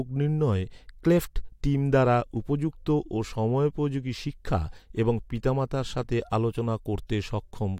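Nothing in the speech stood out as a problem on listening.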